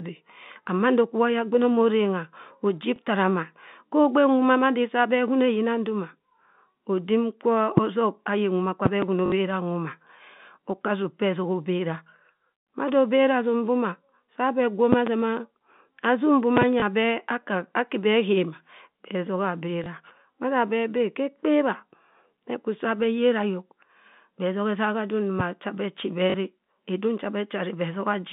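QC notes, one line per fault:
2.96–2.98 s, 9.26–9.32 s, 16.80–16.82 s, 19.84–19.86 s, 26.30–26.34 s: packet loss with last packet repeated. Gaps of 20, 60, 20, 20 and 40 ms, which fits 20 ms packets, are filled by replaying the previous chunk. The 60 ms run buzzes at about 50 Hz like a robotic stutter.
7.77–7.80 s, 8.86–9.05 s, 14.93–15.09 s, 16.57–16.65 s, 25.40–25.43 s: loud pop. Single pops at 7.77 and 25.40 s and double pops in the other three spans, each peaking roughly 20 dB above the speech, are likely electrical steps or pulses added to the signal. The speech continues beneath each pop.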